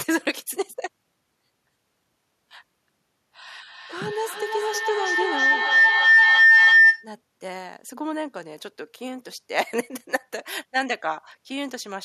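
A feedback howl forms from 3.51 to 7.13 s: a microphone is picking up a nearby loudspeaker on the same call, and each trip round the loop comes back louder. It narrows to a tone near 2 kHz, pulsing about every third of a second, and peaks about 13 dB above the speech.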